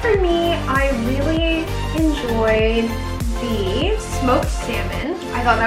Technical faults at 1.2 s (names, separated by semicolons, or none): none